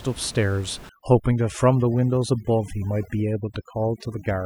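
From 0.89 s onward, overdone noise removal cuts bands near the room-noise floor, about 19 dB below speech, leaving twinkling specks.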